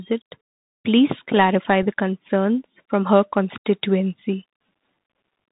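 Throughout, the Bluetooth CVSD headset codec leaves a spectrogram empty above 4 kHz; its one-bit delta coding, fitting a 64 kbps link, adds granular hiss and scratchy sibilants. At 1.83 s, unconcealed Bluetooth headset packet loss drops about 3.8 ms, likely a single packet, leaving a sharp-edged gap in the waveform.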